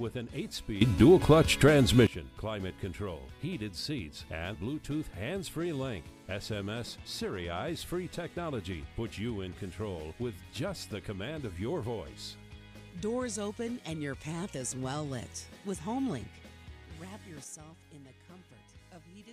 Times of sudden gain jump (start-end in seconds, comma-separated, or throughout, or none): 0.81-2.07, 17.44-19.33